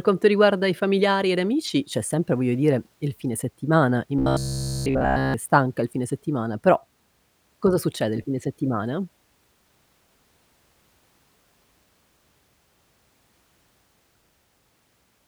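From 4.19 to 5.34 s, between "dire il fine settimana" and "stanca il fine settimana", the speech turns robotic, a case of robotic sound from repeated short buffers. The voice becomes a hard, metallic buzz near 66.7 Hz. It still tracks the speech loosely. The whole stretch sounds looped. The likely cause is audio arriving too late, so the player keeps replaying a short slice of about 15 ms. The real audio in between is lost.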